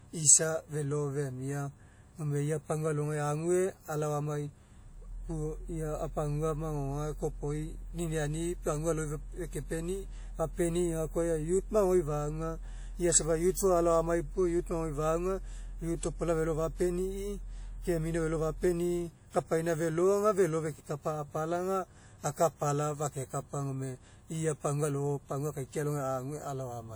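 Throughout the speech, a ringing, washy quality sits on the sound, with a hiss that swells and fades with each phrase. This is most likely WMA compression. A transform codec like this codes the audio in long blocks, so its quantisation noise smears across tens of milliseconds around each sound. Weak spectral detail gets discarded. The damage is plainly audible, which fits a bitrate around 48 kbps. Content still reaches up to about 20.1 kHz.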